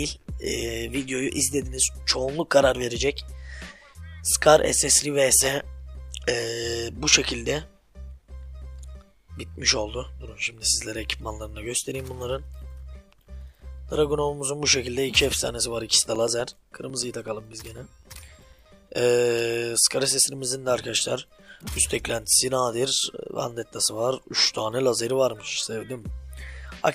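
From 15.90 to 18.66 s there's a run of periodic USB or driver dropouts: every 0.125 s something stalls the audio path and around 4 ms drops out to silence. You hear about twenty evenly spaced ticks, eight a second, riding on the sound.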